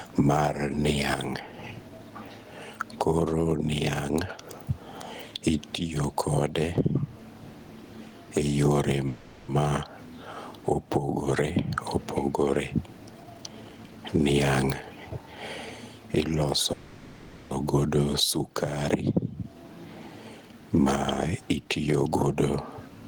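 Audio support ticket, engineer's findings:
Gain pumping, whole clip: roughly 15 dB swing, dynamics squashed. Likely mic gain set far too high with a fast limiter clamping it. Unlike noise suppression, the noise is never removed, only modulated.

Call audio freeze, 9.07–9.50 s and 16.73–17.53 s: last sound stretched into a fading buzz or hiss for about 0.41 s and 0.78 s, then audio resumes where it stopped with nothing skipped. Likely jitter buffer underrun from delayed packets. Unlike packet loss, no content is missing, only a gap inserted.

Jitter buffer speed-up, 13.20–14.34 s (131%, roughly 0.4 s cut), 14.89–15.36 s (109%), 21.56–22.36 s (107%): hurried delivery at unchanged pitch. Receiver trimming pitch-period slices to drain excess buffered delay. Unlike resampling, the pitch doesn't rise.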